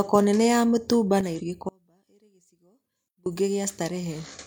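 One channel drops out at 1.21 s, right after "nene ya mitumba", and stays gone to the end. The speech abruptly falls about 6 dB, most likely because one stereo side was lost before the mono sum.

Damaged data in a compressed stream follows from 1.34 to 1.40 s, and again from 4.29 to 4.34 s. Each is a short glitch as the decoder misreads corrupted frames and hunts for the next valid header.

An audio dropout to a faint residue runs from 1.69 to 3.26 s, about 1.57 s. The speech cuts out abruptly and only a faint trace of sound remains, roughly 35 dB down. The likely cause is that the signal was lost while the downstream path stayed live.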